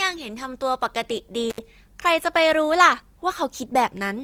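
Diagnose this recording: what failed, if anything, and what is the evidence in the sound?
The failure sits at the codec stage. The speech carries the smeared, coarse texture of a low-bitrate encode, yet the spectrum runs up to about 20.2 kHz, the clean ceiling of a high-rate MP3. The pattern is most likely low-bitrate audio saved at a high bitrate: a source squeezed to something like 24 kbit/s, probably Opus, then re-encoded as MP3 at around 256 kbit/s. The second pass adds file size but cannot restore detail the first encode discarded.

The second fault is an intermittent contact in the analogue wiring, at 1.50 to 1.59 s. The signal drops out for roughly 69 ms. Crackle marks both edges, where the loose connection breaks and then remakes. While the line is open, faint hiss remains. The abrupt cut-and-return, with contact noise at each transition, points to a plug or cable briefly losing continuity rather than to a digital dropout.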